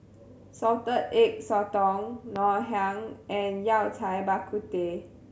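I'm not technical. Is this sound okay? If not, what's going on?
No. There is one loud pop at about 2.36 to 2.39 seconds. It is a short, sharp thump that jumps out well above the speech. The speech carries on underneath it, and nothing else changes. A pop like this comes from a sudden jolt of electricity entering the recording. This was likely from a plug being moved, a switch being flicked, a spark of static, or a brief glitch in the sound equipment.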